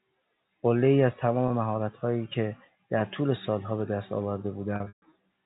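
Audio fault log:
1.48–1.50 s, packet loss with pitch repetition: a 20 ms gap is filled by repeating the last pitch cycle, giving a brief buzzy hold that shows as identical periods on the waveform.
4.76–5.12 s, packet loss with pitch repetition: 220 ms lost across 360 ms, longest run 140 ms. Repeated cycles fade toward silence, and the spectrogram shows frozen harmonics before speech cross-fades back.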